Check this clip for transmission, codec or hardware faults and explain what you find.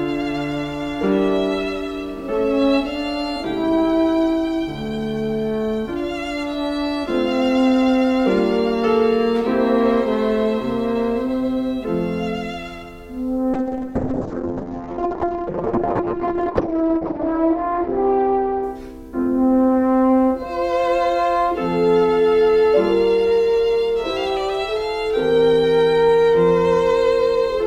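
One fault is present, a call bitrate drop from 13.55 to 20.95 s. Over that stretch the audio turns muffled and rough, its top end shrinking from 20 kHz to 6 kHz, with the worst of it lasting 3.58 s before detail returns. The call's bandwidth estimate collapsed, so the Opus encoder was told to spend far fewer bits, coding coarsely and narrowing its band. The sound fits a fall from around 128 kbps to about 6 kbps.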